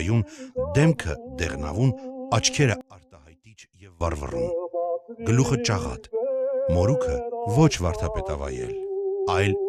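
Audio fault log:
2.81–4.01 s, one channel inverted: for about 1.2 s the sound collapses, dropping by about 24 dB, background included, then returns at full level. The likely cause is one channel of a stereo source running with reversed polarity, so when the two were summed to mono, everything they shared cancelled. What remains in that span is only the difference between the channels, which is why a much quieter residue stays audible instead of silence.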